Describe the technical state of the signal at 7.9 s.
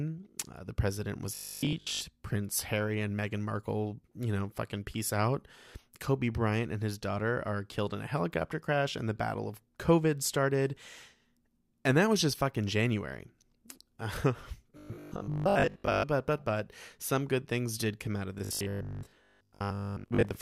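At 7.9 s the speech signal is intact, with no technical fault present at that point.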